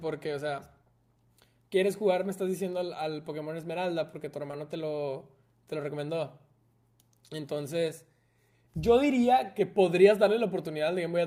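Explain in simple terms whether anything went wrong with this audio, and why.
At about 4.51 to 4.55 s there is a short concealed packet loss: roughly 20 ms of speech arrived too late, so the receiver patched the gap by extending the preceding sound and blending back in. It's heard as a brief smear.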